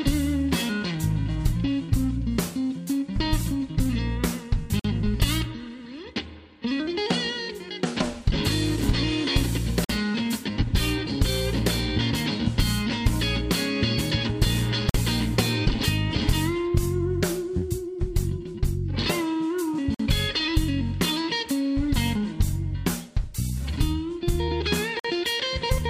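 A gap between chunks appears at 4.79, 9.84, 14.89, 19.94 and 24.99 s. Each 50 ms silence marks a 5 s chunk join, showing as regular vertical blank stripes across the spectrogram and flat gaps in the waveform.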